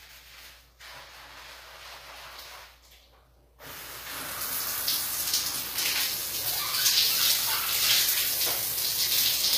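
Throughout the clip the treble has a gritty, metallic sheen that sits unnaturally apart from the lower sound, most likely from HE-AAC compression at a low rate, which fits roughly 24 kbps. Band replication copies lower bands upward, so a spectrogram shows repeated, smeared high-frequency patches above a crossover line.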